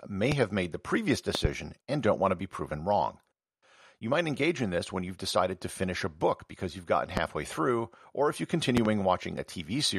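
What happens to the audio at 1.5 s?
A sudden voltage pulse, likely from a plug, switch or static discharge, enters the signal path from 1.35 to 1.47 s, right after "have made the previous". The result is a loud pop: two sharp thumps roughly 20 dB above the speech, which carries on beneath them into "and don't want".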